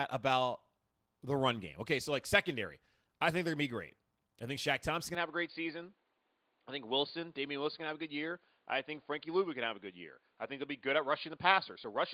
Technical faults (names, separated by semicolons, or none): input switched to a poorer device